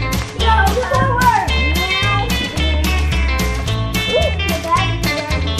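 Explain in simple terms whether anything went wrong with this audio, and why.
Nothing went wrong with this audio. Listening through it, no moment stands out as a technical problem.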